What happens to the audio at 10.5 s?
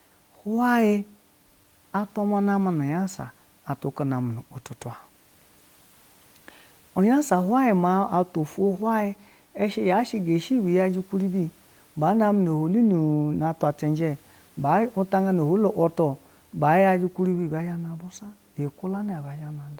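Nothing goes wrong at 10.5 s; the speech carries on intact there, with only the quiet room noise sitting about 38 dB below it as part of the recording.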